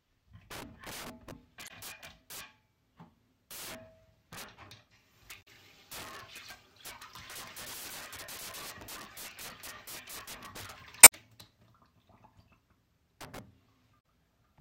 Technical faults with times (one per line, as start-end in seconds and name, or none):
0.00-14.60 integer overflow
1.65-1.71 damaged data in a compressed stream
5.39-5.48 damaged data in a compressed stream
11.01-11.13 damaged data in a compressed stream
13.97-14.04 damaged data in a compressed stream